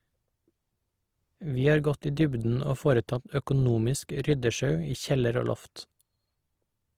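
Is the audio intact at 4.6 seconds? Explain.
No. At 4.6 seconds, as throughout the clip, the speech carries plainly audible damage from what is likely Opus compression in its music (CELT) mode at a low rate, around 24 kbps. Starved bands are filled with folded or noise content, making the sound grainy and rough. A spectrogram shows full bandwidth but smeared, noisy texture replacing clean harmonics.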